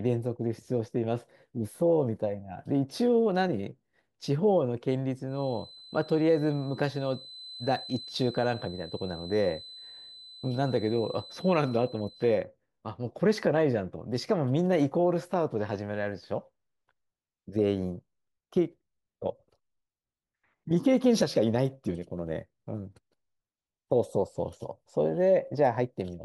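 A speech recording carrying a feedback whistle from 5.25 s to 12.48 s: a thin, steady tone at 4 kHz sits behind the speech, around 20 dB below it, swelling and fading slowly in level without building up. The likely cause is a loudspeaker-to-microphone loop running just at the edge of instability, where the gain at 4 kHz is high enough to sustain that single frequency but not enough to let it run away into howl.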